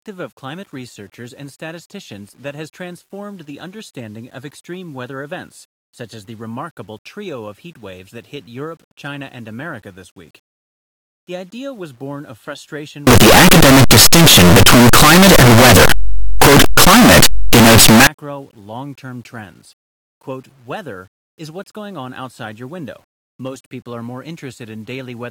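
Signed and unsigned mixed up, from 13.07 to 18.07 s: for these five seconds the speech turns into very loud, harsh distortion, and soft sounds come out as loud as strong ones. The likely cause is 8-bit samples read with the wrong sign convention, flipping the top bit so every zero crossing leaps across the full range.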